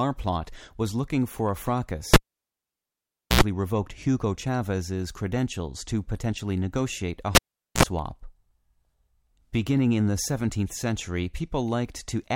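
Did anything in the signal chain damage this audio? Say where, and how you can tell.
Yes. The damage is in the analogue wiring: a cable pulled and plugged in, twice. At 2.14 s a pop drops the speech to near silence for about 1.23 s, then a 78 ms burst of 60 Hz mains buzz and a second pop bring it back by 3.41 s. The same happens at 7.35 s, with 0.43 s of silence and 52 ms of buzz before the return at 7.83 s. The buzz is the plug tip alone touching the live jack.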